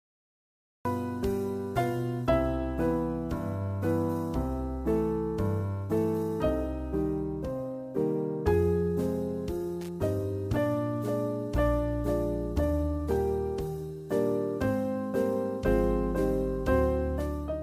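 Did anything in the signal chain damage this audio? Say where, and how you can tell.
Yes. Cut-off start, at the recording or storage stage: digital silence until 0.85 s, then sound enters mid-event with no attack, unlike a fade-in or gate opening.

Loose connector crackle in the analogue wiring: an irregular scratchy burst from 9.81 to 9.89 s, a contact briefly breaking, not the clean gap of a digital dropout.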